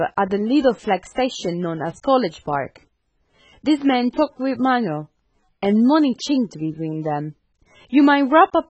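Throughout, the speech sounds dull and smeared, with nothing above 8.3 kHz and fizzy sibilants, likely from heavy AAC compression at a rate consistent with 16 kbps.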